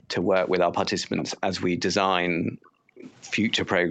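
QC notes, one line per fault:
0.21–0.34 s, 0.98–1.11 s, 2.35–2.95 s: background gated by the echo canceller. While far-end audio played, the canceller clamped the microphone, so room sound sinks by about 9 dB in the first dip and about 40 dB in the others, the last lasting roughly half a second, then recovers.
0.54–0.59 s, 1.17–1.37 s, 2.95–3.13 s: echo leak. Residual loudspeaker pickup was likely passed back uncancelled, giving faint delayed copies of the speech about 0.45 s, then 0.51 s, 0.51 s behind, at about 20, 15 and 20 dB below the main speech.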